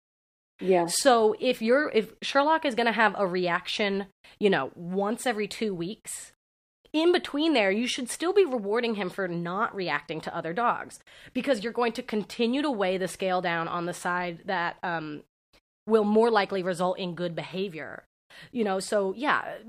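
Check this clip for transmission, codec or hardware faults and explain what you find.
I found nothing to explain in this clip.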